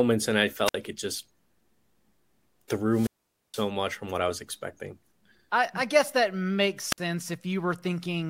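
Speech with three wireless microphone squelch dropouts. The radio signal fades, hiss swells, and the receiver's squelch mutes the output. There is a 56 ms hole at 0.65 s, after "and I". A 472 ms hole starts at 2.9 s, before "much from what I". A 54 ms hole comes at 6.88 s, after "I guess that makes".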